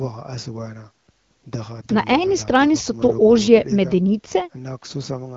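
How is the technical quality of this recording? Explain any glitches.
Nothing here counts as a glitch: the speech comes through the AMR wideband (HD Voice) codec at 12.65 kbit/s, a rate where that codec keeps speech clear, and there's nothing else to flag.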